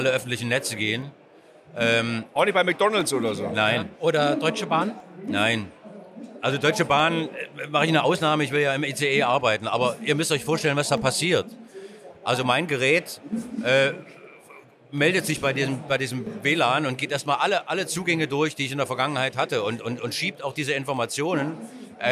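Something in the system is stalling the USB bus or the audio driver on a fixed schedule, causing periodic USB or driver dropouts. From 1.02 s to 20.97 s, every 2.0 s, around ten times in all, roughly a millisecond of audio goes missing and is replaced by silence. Each gap breaks the waveform abruptly, so the sound carries a regular tick or pop at that steady two-second spacing, audible wherever signal is present.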